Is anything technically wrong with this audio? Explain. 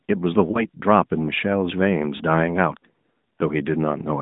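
Yes. Lost AMR speech frames occur at 0.52 to 0.66 s and again at 2.18 to 2.23 s, each a single 20 ms frame. With the frame missing, the decoder repeats the last good pitch and vocal tract settings at reduced gain, so the speech briefly dips or warbles before recovering weak or rough for a moment.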